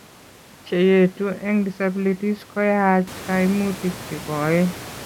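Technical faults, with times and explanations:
No technical faults; the room noise rises by about 12 dB at roughly 3 s but stays about 17 dB below the speech.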